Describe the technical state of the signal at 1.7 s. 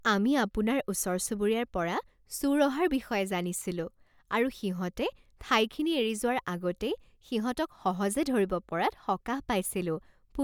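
At 1.7 s the speech signal is intact, with no dropout, distortion, glitch or other technical fault at that point.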